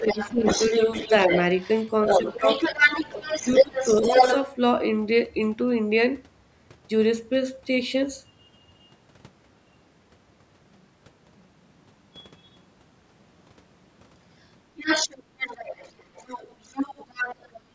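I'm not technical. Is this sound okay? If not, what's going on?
No. Three things go wrong.

Other side's voice leaking through: a second voice is heard from 0 to 1.4 s, faintly at 1.6 to 1.89 s, from 2.05 to 4.46 s, and again from 14.78 to 17.6 s. At times it is nearly as loud as the main talker. It is likely the far end's loudspeaker echo, not fully removed.

Speech suppressed in double talk: while that second voice plays, the main talker briefly dips or drops out. This happens at 0.01 to 0.45 s, 2.23 to 2.44 s, 3.11 to 3.28 s and 3.62 to 3.75 s. Each dip is short.

Switch to a distant microphone: from 8.78 s to the end, the voice suddenly sounds roomier and more hollow. The loudness stays about the same, but room noise becomes noticeable. The likely cause is that the recording jumped to a microphone further away.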